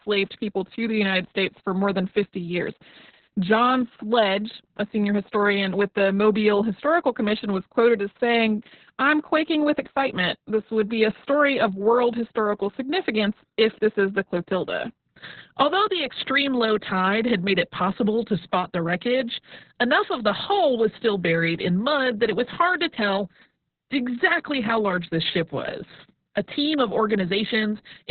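Throughout, the speech sounds muffled, hoarse and slightly robotic, with nothing above 4.4 kHz. This is heavy Opus voice compression. The narrowband, coarsely coded sound points to Opus's SILK linear-prediction coder running at a very low bitrate, around 6 kbps.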